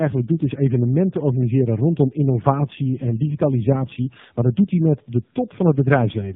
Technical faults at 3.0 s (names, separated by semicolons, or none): tandem speech coding